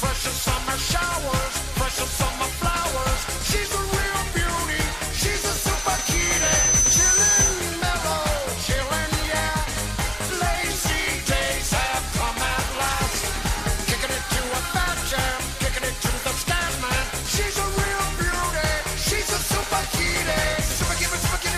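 From 5.15 to 7.70 s a loudspeaker feedback squeal at 6.1 kHz swells over roughly a second and a half, peaking about 5 dB above the programme, as the mic-to-speaker loop exceeds unity gain.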